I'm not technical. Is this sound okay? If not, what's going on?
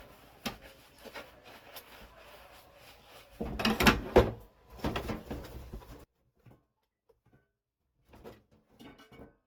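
No. All the way through, the sound is swirly, smeared and a bit hollow, and sharp starts blur. That is generation loss. It was likely squeezed and unpacked with lossy compression about four times over, and each round added more damage.

From 6.04 seconds to the end, the sound nearly disappears, leaving only a faint trace. That is one channel inverted. One side was likely flipped, so the two sides cancel each other when combined.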